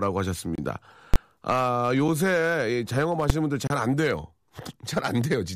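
At 0.55 to 0.58 s the speech drops into a block of digital silence lasting about 27 ms: samples were zeroed, probably because the output buffer wasn't filled in time. The abrupt cut and return leave a brief hole. At 1.14 to 1.16 s invalid numbers at full scale pin the output flat at one extreme value for 20 ms, giving a loud pop at each end. At 2.08 s a 5 ms zeroed block is heard only as a tick or dip. At 3.30 s a 5 ms full-scale block collapses into one sharp bang. At 3.67 to 3.70 s a 30 ms silent gap again leaves an audible hole.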